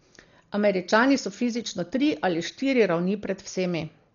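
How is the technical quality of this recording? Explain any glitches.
The quality is poor: the speech carries heavy codec damage from start to finish.

Dolby Digital compression, throughout the clip, is the likely cause. At a very low bitrate, around 40 kbps by the sound of it, the encoder discards the upper band and leaves many frequency lines without mantissa bits, so the decoder fills them with dither noise. Nothing remains above 7 kHz, which makes the speech dull and muffled, and a rough, fluttering noise clings to the voiced tones.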